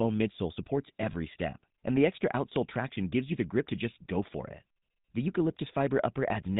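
This is a speech clip that runs through the GSM full-rate codec from start to finish, and the coding damage is plainly audible. There's nothing above 4 kHz, and the pulse-driven excitation leaves a buzzy, gravelly roughness that fits 13 kbps full rate. There are also lost GSM frames at 1.12 to 1.15 s, right after "midsole supports" and before "step and the extra". The decoder held the last good frame briefly, which gives a short metallic ring consistent with a single dropped 20 ms frame.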